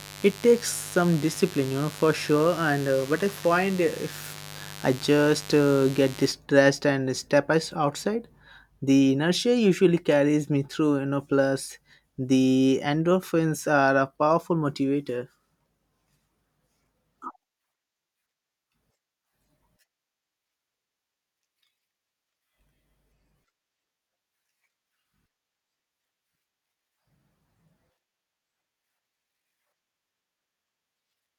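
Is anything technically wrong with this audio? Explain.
Yes. From 0 to 6.32 s, mains buzz at 50 Hz sits well below the speech, roughly 20 dB down. Switching spikes twice per cycle spray harmonics into the kilohertz range, giving a raspy hum. On a spectrogram it shows as evenly spaced horizontal lines every 50 Hz.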